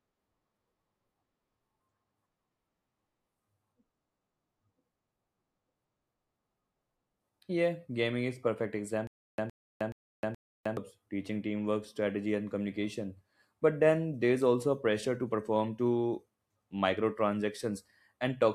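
Stutter with silent gaps runs from 9.07 to 10.77 s, right after "gaming is perfect". A 114 ms fragment of speech plays four times, each followed by about 310 ms of dead digital silence, so the burst comes back at an even 424 ms pace. This is likely a stalled player or stream that replayed its last buffer at each retry and then ran dry. The speech from that stretch is lost, and playback resumes at "teaching teamwork strategy and".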